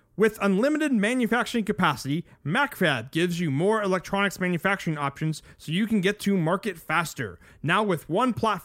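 Listening closely to the speech, nothing stood out as a technical fault at any point.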